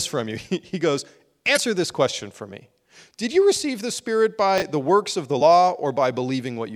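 A speech clip with two kinds of fault. The first is damaged data in a compressed stream. It appears twice: from 1.53 to 1.58 s, just before "this question for", and again at 5.40 s, right after "the works of the". Corrupted bytes in the stream made the decoder misread the frames there and lose sync. It then hunted for the next valid frame header. Each spot sounds like a short chirp or blip. The second fault is chunks out of order, from 4.58 to 4.62 s, just before "the works of the". A 20 ms chunk arrived one chunk late and played after the one that should follow it. No audio is missing, but the swapped order leaves three hard joins. The result is a brief jumbled moment.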